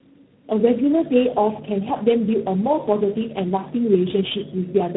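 Tandem speech coding runs through the whole clip: the speech sounds rough, muffled and warbly, consistent with about three low-rate speech coders in series, and nothing is heard above 3.8 kHz. Mains hum enters at 0.96 s and continues to the end: a steady 50 Hz tone, fairly prominent beneath the speech, from power-line interference leaking into the signal.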